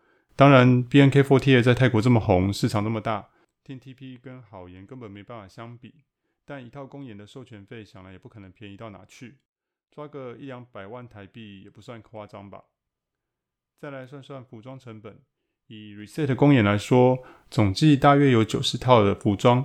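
A speech recording with zipper noise in two places. From 2.60 to 3.69 s the level drops by around 20 dB in audible 1 dB steps, roughly twenty a second, and from 15.96 to 16.38 s it climbs back up by a similar amount at a faster rate of about fifty steps a second. Each unsmoothed step leaves a small click, so a ticking rides on the speech during the move.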